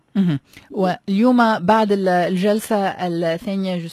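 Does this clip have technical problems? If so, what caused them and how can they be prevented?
Yes, from 1.30 s to the end the adaptive stream drops to a lower bitrate: treble gone above 14.9 kHz, artefacts up, no gap, fitting a switch from around 96 to 20 kbit/s. A steadier connection or a higher minimum bitrate would prevent it.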